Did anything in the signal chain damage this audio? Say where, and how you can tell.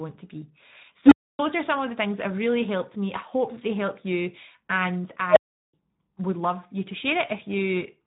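Yes. At the codec stage, the whole clip carries Speex codec damage that is plainly audible. The speech sounds noisy and hoarse, with the rough, buzzy excitation of a CELP coder starved of bits, which fits a bitrate around 11 kbps. Nothing remains above 3.8 kHz, so the top of the band is simply gone. Sibilants and breath lose their edge, and the voice sounds dull and boxed in.

A separate processing fault is an unstable filter, a recursive stage whose feedback ran away. It happens twice. After "to be", at 1.06 s, a low tone of roughly 300 Hz swells to full level within about 55 ms and clips. The output then drops to silence for about 280 ms until the filter resets, ending at 1.39 s, just before "are some of the". At 5.30 s, after "they help you and", a higher tone of roughly 700 Hz builds over about 65 ms and clips in the same way. It is followed by about 370 ms of silence, ending at 5.73 s before "would love you to".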